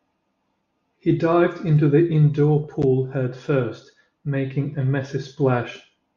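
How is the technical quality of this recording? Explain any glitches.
No technical faults are audible.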